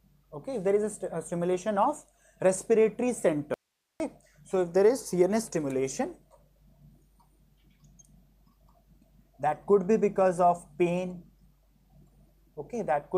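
At 3.54 s the sound cuts abruptly to faint hiss for 0.46 s: an audio dropout to a faint residue, likely from upstream signal loss.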